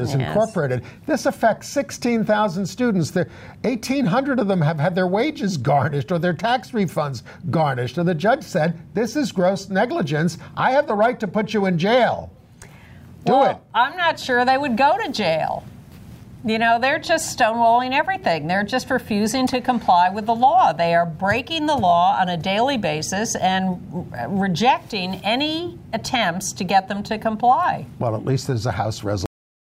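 Right at 29.26 s the sound just stops dead, mid-event, and what's left after that is pure digital silence with no tail or decay at all. That's a cut-off end: the final buffers never got written or played back, so the recording ends abruptly instead of finishing naturally. You lose roughly the last half second, and the jump from active sound to flat silence is what gives it away.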